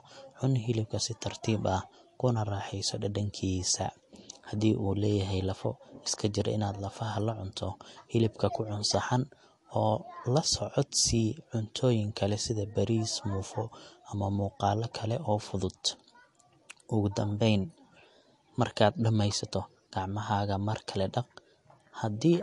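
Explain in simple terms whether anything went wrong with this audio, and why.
Something did go wrong, and it lasts the whole clip. The speech has the watery, swirly sound of MP3 compression, which is the likely cause. The encoder had too few bits to spend. So it cut off everything above about 11.3 kHz, which makes the voice dull at the top. It also dropped quiet details that flicker in and out. That flicker makes s sounds chirpy and metallic, and the starts of sounds are blurred.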